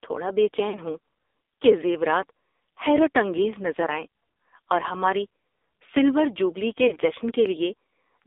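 The whole call passes through the AMR narrowband mobile codec, running at a low rate that fits a mode near 6 kbps. The line is limited to roughly 300 Hz to 3.7 kHz, so the speech sounds thin and boxed in, with no low body and no upper brightness. Because so few bits are spent per frame, the vocal-tract model is coarse. The damage is heavy: a buzzy, synthetic edge clings to every syllable.

At 0.70 s, right after "تھوڑا بے", radio errors cost the decoder lost AMR speech frames, which fits two consecutive 20 ms frames. The decoder reused its last good pitch and spectral settings at falling gain, so for about 0.1 s, to 0.80 s, the sound smears into a brief dip and warble before the speech returns slightly rough. The same failure recurs at 6.88 s, after "سلور جوبلی کے", lasting until 6.98 s, with a similar momentary sag and smeared tone.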